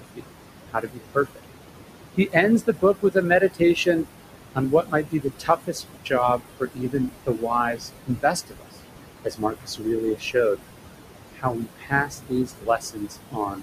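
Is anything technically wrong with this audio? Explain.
Yes, two related problems. Throughout, there are noise suppressor artifacts: the suppressor pulls the steady room noise, sitting about 9 dB under the speech, down by about 21 dB, so the background dips and pumps against the talking. There's also speech cut by the noise suppressor at 0.01–0.24, 0.69–1.45, 2.17–4.07, 4.55–8.75, 9.25–10.59 and 11.33–13.62 s. It mistakes quieter speech for noise and drops it by about 21 to 22 dB, so bits sound swallowed, around two seconds' worth in the 4.55–8.75 s stretch alone.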